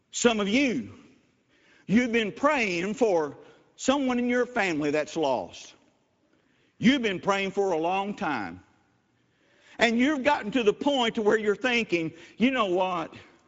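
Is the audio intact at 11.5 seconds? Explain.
No. At 11.5 s, as throughout the clip, the speech sounds hoarse and grainy, with nothing above 7.6 kHz. This is Speex codec damage: the CELP coder, at a rate that fits roughly 17 kbps, has too few bits to rebuild the excitation cleanly.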